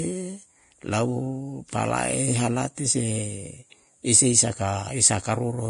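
The speech was likely passed through Vorbis compression at low quality, which fits a bitrate of around 32 kbps. The encoder kept only a coarse outline of the upper spectrum and replaced its fine structure with noise of similar energy, and it discarded everything above 10.6 kHz. From start to finish the sound is heavily damaged: the treble turns hissy and grainy, tones sound roughened, and consonant onsets lose their sharpness.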